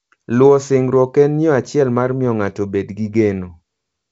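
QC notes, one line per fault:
The speech carries the sound of G.722 wideband telephone coding, with content reaching 7.7 kHz and nothing above it, and a light grain in the lower band that fits the 56 kbit/s mode.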